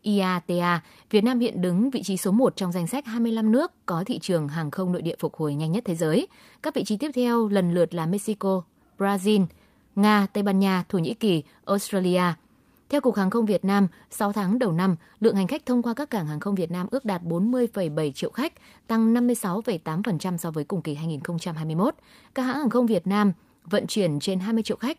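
Nothing technical goes wrong anywhere in this speech recording, so there's no fault to point to.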